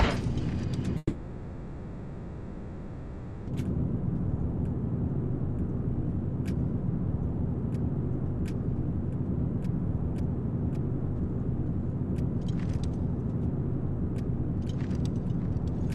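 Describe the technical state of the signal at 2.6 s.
A long network dropout spans 0.97 to 3.49 s, so at 2.6 s no real audio is reaching the output. The most likely cause is a sustained interruption in packet delivery, with about 2.5 s of the original sound never arriving. The receiver continues the last received sound as a fading buzz or hiss. Normal audio returns at 3.49 s, and the lost section is not recovered.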